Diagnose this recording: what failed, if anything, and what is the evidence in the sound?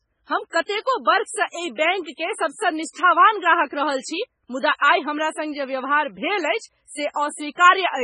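The fault is at the codec stage and lasts the whole clip. The speech has nothing above 10.5 kHz and sounds heavily watery and swirly. This is likely MP3 compression starved of bits, fitting about 16 kbps. The encoder cuts the treble and drops weak frequency lines frame by frame.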